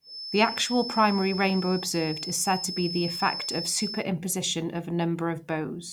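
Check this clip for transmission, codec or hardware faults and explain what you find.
There's one fault here, a feedback whistle. From the start to 4.07 s, a thin 5.2 kHz tone sits about 10 dB under the speech, swelling and fading slowly, likely from a speaker-to-mic loop hovering at the edge of feedback.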